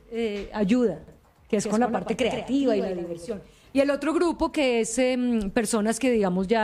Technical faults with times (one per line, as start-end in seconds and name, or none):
1.08-3.30 doubled audio track